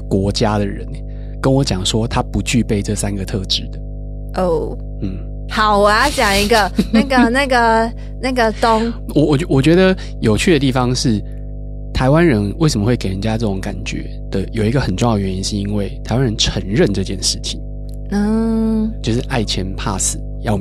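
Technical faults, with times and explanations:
Throughout: mains hum, a steady low tone at 50 Hz sitting under the speech at roughly 10 dB below it, loud enough to stay audible in every pause. The alternating current of a 50 Hz power supply has leaked into the signal path, through a ground loop between connected equipment or through magnetic pickup from a nearby transformer, so the grid's own frequency and its low harmonics ride on the recording as a constant drone that never changes with the speech.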